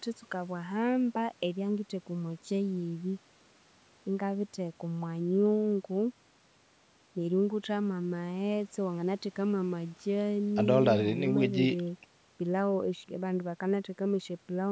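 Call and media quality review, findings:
No faults found in the speech: the signal shows the expected call microphone processing, with the lowest bass trimmed and content extending no higher than 8 kHz.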